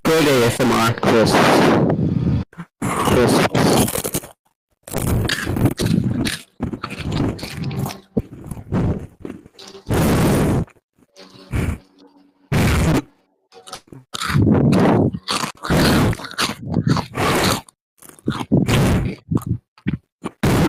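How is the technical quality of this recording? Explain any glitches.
The recording has four call-transmission glitches, clustered between 4.3 and 14.1 seconds.

Call audio freeze, 4.33 to 4.47 s: packets were likely held up, so the jitter buffer ran dry; the sound stretches into a fading buzz or hiss, then 90 ms of silence.

Short concealed packet loss, 4.61 to 4.64 s: about 20 ms never reached the decoder in time, and the receiver patched the hole, leaving a brief smear or wobble.

Call bitrate drop, 4.94 to 13.0 s: the encoder's rate fell from 48 to 17 kbps, bottoming out for about 5.3 s. Coarser coding makes the audio rough, watery or dulled in the highs.

Jitter buffer speed-up, 11.95 to 14.06 s: excess buffered audio was trimmed in small pitch-period slices, around 70 ms in total. Playback runs about 3 percent fast at an unchanged pitch.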